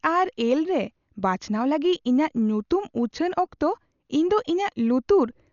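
Speech, and it's dull and band-limited throughout, with nothing above 7 kHz and a rough, fluttering noise around tones, most likely heavy Dolby Digital compression at around 48 kbps.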